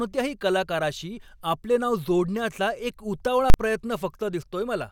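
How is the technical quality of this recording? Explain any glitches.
The speech has one serious glitch. From 3.5 to 3.54 s, a calculation produced invalid numbers at full scale: infinite or undefined values were clamped to the largest positive or negative value, pinning the output for the 40 ms block. With the signal held flat at one extreme value for so brief a span, it comes across as a single loud bang.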